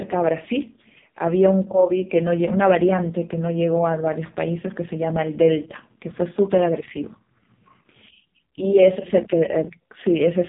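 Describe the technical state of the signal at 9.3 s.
At 9.3 s the speech is still passing through the AMR narrowband mobile codec, as it does for the whole clip. The vocal-tract model is starved of pulses, which fits the lowest 4.75 kbps mode, so the sound is buzzy and synthetic, with nothing above 3.8 kHz.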